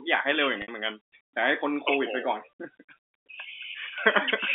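At 0.62 s the sound briefly catches on a held, buzzy tone that starts to fade before the speech resumes at 0.68 s. This is packet loss with pitch repetition. About 60 ms of audio went missing, which fits three 20 ms packets. The receiver filled the gap by repeating the last pitch period and tapering it off, then cross-faded back into the incoming signal. The narrow telephone band of the G.711 line carries through the repair.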